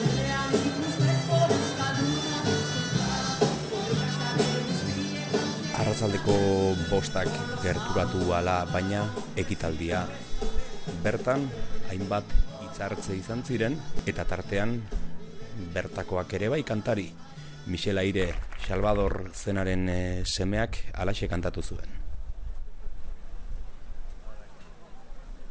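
Throughout the audio, the upper frequencies sound gritty and metallic, with stray tones folding down below 8 kHz, sitting roughly 25 dB under the main signal. This aliasing fits a sample-rate drop from 48 kHz to 16 kHz made without filtering first.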